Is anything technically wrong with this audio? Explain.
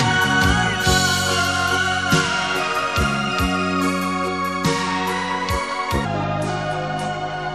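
Yes. From 6.05 s to the end, a section runs at the wrong speed, about 0.74 times normal. Speed and pitch drop together, roughly five semitones, so the sound turns deep and sluggish. Likely a playback or edit clocked at the wrong rate.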